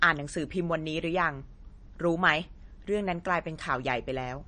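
From start to finish the speech has a hard treble ceiling, with nothing above 9.4 kHz, and a plainly audible watery, swirling quality, smeared consonant onsets and metallic chirps on s sounds. These are likely MP3 compression artefacts, consistent with a starved bitrate in the low thirties of kbps. The encoder trimmed the top band and dropped weak frequency lines that flicker between frames. A spectrogram would show a flat cutoff and speckled, patchy holes in the upper energy.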